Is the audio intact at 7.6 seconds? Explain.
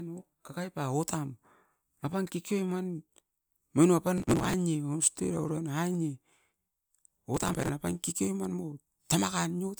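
No. At 7.6 seconds the speech is inside a stretch of processor overload crackle running from 7.35 to 7.69 s. The processor falls behind and misses buffer deadlines again and again, about 50 of them. The gaps point to buffers of about 5 ms. Each missed buffer is skipped outright, leaving a short hole with abrupt edges. Strung together, these holes produce a gritty, tearing crackle over the speech that stops once the overload clears.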